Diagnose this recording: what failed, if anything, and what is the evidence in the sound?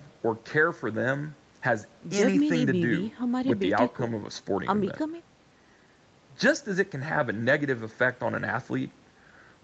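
Nothing failed: the audio bears the marks of a call chain working as intended, with the microphone processing trimming the lowest bass and the WebRTC call path's codec limiting content to below 8 kHz.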